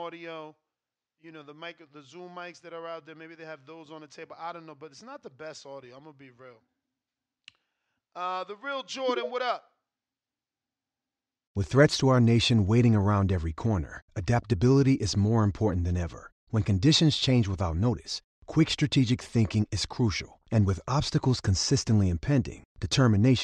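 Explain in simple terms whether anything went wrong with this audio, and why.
Nothing went wrong here: listening through this speech recording, there's no glitch, dropout or distortion to point to anywhere along the way.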